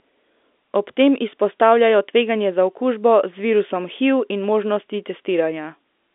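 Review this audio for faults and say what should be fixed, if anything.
Nothing needs fixing; no faults can be heard here.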